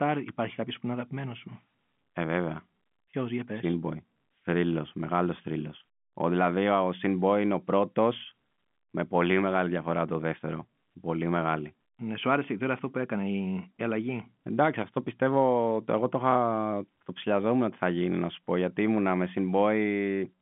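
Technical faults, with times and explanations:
No technical faults detected.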